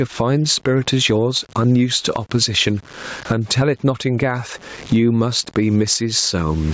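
Speech runs through a call-style microphone chain, with nothing above 8 kHz. The whole thing has a grainy, gritty edge from low bit depth without dither. The rounding error tracks the voice, sitting roughly 35 dB under it, so quiet tails crackle and break up. That grain fits truncation to about 8 bits. Gain pumping is there for the full clip too. The gain swings by around 20 dB, leaving everything squashed. The likely cause is gain set far too hot with a fast limiter clamping down on each loud syllable.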